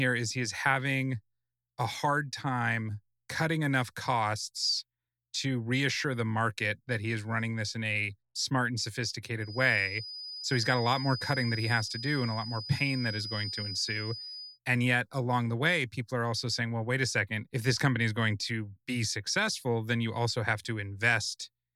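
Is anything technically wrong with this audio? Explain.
Yes. A feedback whistle runs from 9.38 to 14.60 s, starting just after "in a smart and". The likely cause is a loudspeaker-to-microphone loop held right at the edge of feedback, so a single frequency near 5 kHz keeps ringing without building into a howl. It is a thin, steady whistle about 10 dB below the speech, swelling and fading slowly in level.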